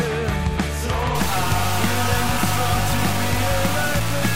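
Low bit depth without dither sets in at 1.15 s and runs to the end. The audio turns coarse and grainy, with distortion that shifts with the sound and quiet parts sputtering, sitting only about 10 dB below the signal. This likely comes from truncation to roughly 3 bits.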